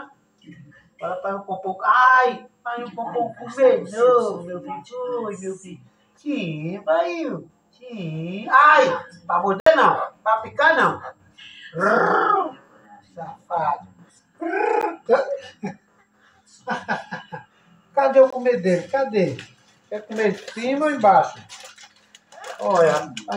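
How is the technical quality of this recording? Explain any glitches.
The recording has three short dropouts, each a block of digital silence. At 9.60 to 9.66 s a 64 ms hole opens. At 14.81 s a 13 ms gap gives a tick. At 18.30 to 18.33 s a 21 ms gap pops, which fits a missed 1024-sample buffer. In each case the output buffer likely went unfilled in time, so the samples became zeros and the sound cut out and returned with no fade.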